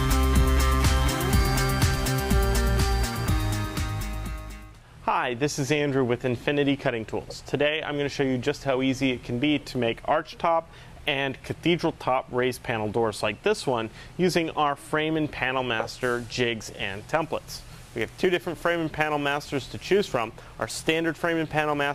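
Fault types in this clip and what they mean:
crude rate conversion: From 17.22 s to the end, a gritty, inharmonic fizz rides on the louder and higher sound, sitting roughly 25 dB below it. Samples are being dropped or repeated without filtering, in a pattern that fits a 48 kHz to 44.1 kHz conversion.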